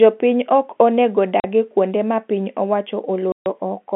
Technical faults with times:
1.40-1.44 packet loss filled with silence
3.32-3.46 packet loss filled with silence

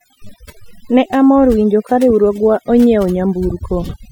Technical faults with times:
0.00-4.12 overdone noise removal

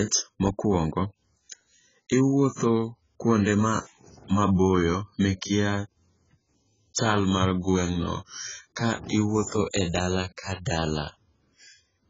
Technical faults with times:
0.00-12.09 AAC compression

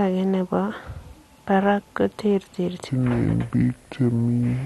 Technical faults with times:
0.00-4.66 MP2 compression
2.89-4.66 section at the wrong speed

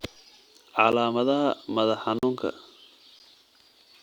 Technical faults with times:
0.92 block of digital silence
2.19-2.23 block of digital silence
3.19 block of digital silence

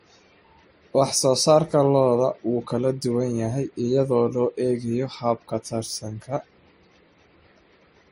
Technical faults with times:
0.00-8.12 transcoding between lossy codecs

